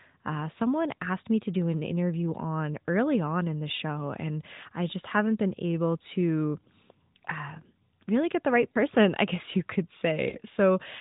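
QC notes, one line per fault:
3.76–3.79 s, 8.72–8.76 s, 10.30–10.40 s: lost AMR speech frames. Each event is a brief dip or warble consistent with a single lost 20 ms frame. After the frame failed its checksum, the decoder filled the gap by reusing the last good pitch and vocal tract parameters at reduced gain, and the speech comes back weak or rough for a moment. The narrowband codec band-limits everything to 4 kHz, which fits the 12.2 kbps AMR-NB mode.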